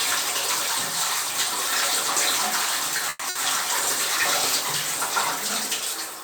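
Call audio freeze at 3.09 to 3.23 s: the sound stretches into a fading buzz or hiss for about 120 ms, likely because delayed packets drained the jitter buffer. It then resumes intact but 120 ms late. Burst of packet loss at 3.29 to 3.37 s: about 60 ms of sound is lost and concealed with a decaying continuation before playback skips ahead.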